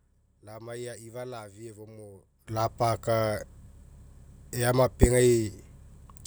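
At about 2.48 s there's a sudden gain jump: the speech and the background noise step up together by about 16 dB and stay there right to the end. There's no fade into it, so the level snaps from one sample to the next. That's most likely a digital gain setting, or a bit shift, applied without any ramp. Because the noise floor rises with the speech, it sounds like someone yanked a fader rather than like the talker getting louder.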